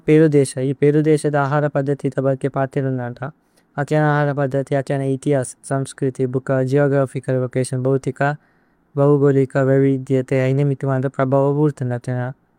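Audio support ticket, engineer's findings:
Listened through the speech recording and nothing stood out as a fault.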